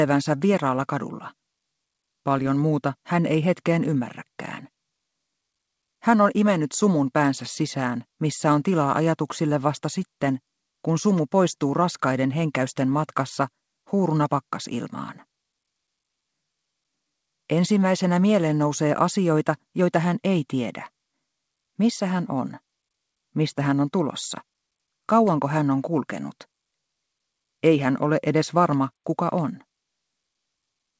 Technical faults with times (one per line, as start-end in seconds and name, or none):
none